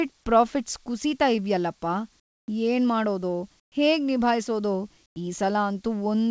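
A speech clip, band-limited to nothing above 8 kHz, with comfort noise in place of the background in three pauses: 2.20 to 2.48 s just after "ಕುಸೀತಾ ಇವ್ಯಲ್ಲಪ್ಪ", 3.60 to 3.72 s, and 5.06 to 5.16 s. Each gap swaps the real room tone for smoother synthetic noise that sits about 16, 20 and 11 dB quieter. That's likely discontinuous transmission, where the sender goes silent in pauses and the receiver synthesises stand-in noise.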